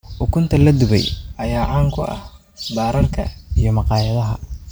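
Channel delay (comb filtering) from 1.35 to 3.27 s, after "la dubay": one channel lags about 5 ms, so the mono sum notches from around 100 Hz upward, hollowing the speech.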